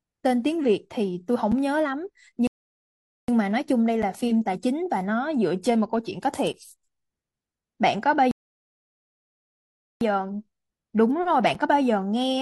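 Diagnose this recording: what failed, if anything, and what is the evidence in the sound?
Rebuffering stall in playback: the player ran dry, leaving silence at 2.47–3.28 s and 8.31–10.01 s. The speech then resumes where it stopped. Unlike a dropout, nothing is skipped.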